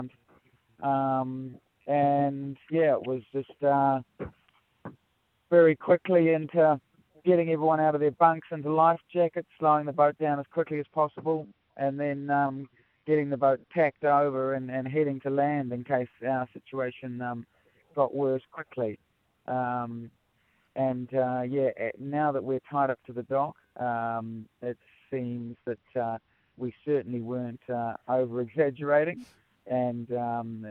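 Twice the audio loses its treble and takes on a gritty noise: from 10.74 to 14.34 s and again from 25.38 to 27.07 s. This is a Bluetooth SBC bit pool drop. A congested link made the sender cut the bit pool, which fits a fall from 31 to about 12, near 88 kbps. The upper sub-bands were starved and the rest coarsely quantised. Unlike a dropout, the sound never stops. Unlike a simple low-pass, grit rides along until the rate recovers.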